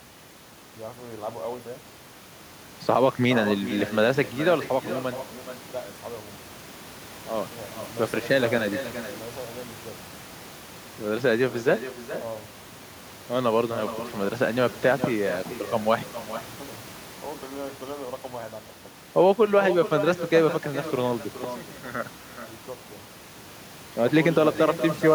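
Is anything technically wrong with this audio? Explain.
Yes. Throughout the speech there is echo with no canceller: every phrase is followed, roughly four tenths of a second later, by a copy about 12 dB quieter and thinner than the original. The far end is playing the call over a loudspeaker, its microphone is capturing that playback, and no echo cancellation strips it out, so the talker's own voice returns after the network round trip. The room noise sits about 20 dB below the speech and is part of the recording.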